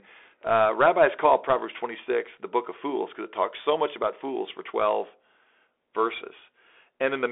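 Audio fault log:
Throughout, Bluetooth CVSD headset codec: the speech is confined to a telephone band of roughly 300 Hz to 3.5 kHz. Above that, a spectrogram shows nothing, with a hard ceiling near 3.5 kHz and a thin low end. The codec sends only one up-or-down bit per sample, which fits a 64 kbps CVSD link, so the coarse tracking is plainly audible. Sibilants turn scratchy and a granular hiss sits under the voice, seen as a speckled noise floor and a jagged waveform.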